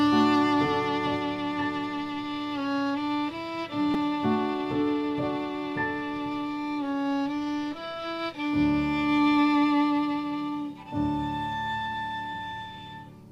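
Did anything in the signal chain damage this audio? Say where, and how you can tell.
Yes. At 3.94 s the driver or buffer stage produced a repeated buffer. A piece of roughly 5 ms was played twice more with hard joins, replacing about 10 ms of new audio, so it sounds as a click or brief buzz. A dropout would leave a gap instead of repeated material.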